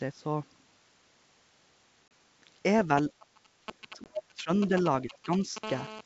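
Around 2.08 to 2.11 s there's a hard-edged 30 ms hole, which fits a few packets dropped on an ADPCM call. The decoder's predictor and step size lose track of the sender, so the speech comes back slightly distorted before it settles. A shorter 20 ms dropout at 4.04 to 4.10 s (about two packets' worth) does the same thing.

From 2.98 to 5.58 s you get GSM signalling bursts: a galloping dit-dit-dit of short buzzes at 217 Hz. That's a nearby 2G phone handshaking with the network, and the audio circuitry rectifies its radio bursts. It's loud, only a few dB under the speech.

Over that same stretch the speech itself dips at 3.19 to 3.49 s, 3.66 to 4.5 s and 5.05 to 5.29 s. The first drop is very deep. That's likely speech suppressed in double talk, where the echo canceller mistakes both sides talking at once for echo and ducks everything.

Finally, from 5.64 to 6.01 s there's a steady GSM phone buzz. 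It's a raspy, harmonic-rich 217 Hz drone about 12 dB below the speech, from a phone now in an active call, sitting on top of the clean 7 kHz G.722 band.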